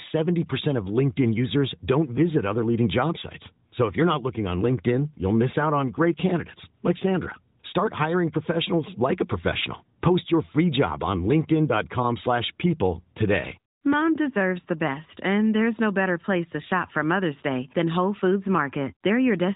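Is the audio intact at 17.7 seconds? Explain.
Yes, at 17.7 seconds the speech is intact, with no fault at that moment.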